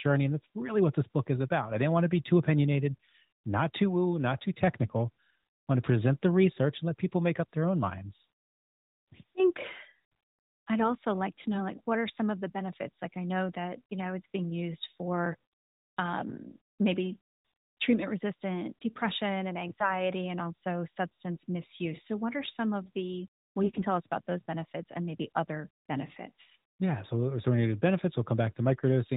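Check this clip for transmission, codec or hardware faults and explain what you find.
There are two short stretches of AMR bit errors, riding on narrowband mobile audio with nothing above 4 kHz. The first runs from 19.70 to 20.01 s, right after "treatment resistant depression and". The second runs from 23.62 to 23.84 s, just after "some of the well". In each, several frames came in with a few percent of their weaker bits flipped while the checksum still passed. The excitation pulses and the fine pitch, gain and spectral values got scrambled, so the voice keeps its rough level and pitch but briefly goes hoarse and gargly.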